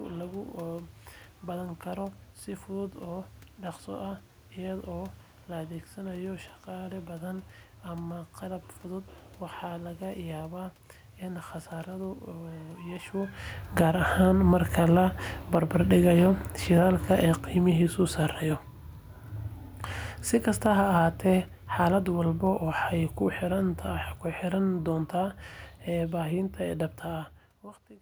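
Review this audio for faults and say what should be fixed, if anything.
The speech and the room noise behind it sink together, from 13.65 to 18.33 s by about 7 dB and again from 20.33 to 23.82 s by about 4 dB. This is automatic gain falling: the gain control judged the input too loud or its background noise too strong and gradually lowered its gain. The first drop begins shortly after the talker moves at the microphone around 13 s. To prevent it, set a fixed input gain with enough headroom, or slow the gain control's attack and cap how far it can reduce the level.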